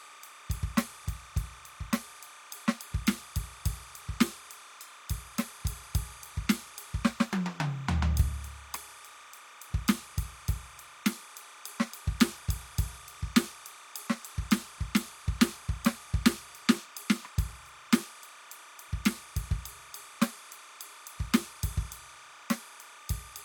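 Timecode bleed runs under the music from start to finish, a chirping warble flipping between tones around 1 and 2 kHz, roughly 20 dB down, which fits 29.97 fps code.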